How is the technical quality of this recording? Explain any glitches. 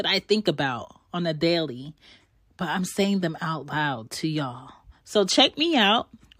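No glitches or technical faults can be heard here.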